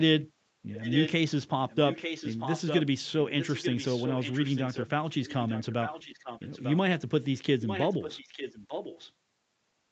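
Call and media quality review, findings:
Echo leak: a delayed copy of the speech trails about 0.9 s behind, at 0.72–1.11, 1.69–2.88, 3.39–4.87, 5.11–6.77 and 7.6–9.12 s. It is loud early and weaker later. Likely cause: an echo canceller is passing loudspeaker pickup back into the call.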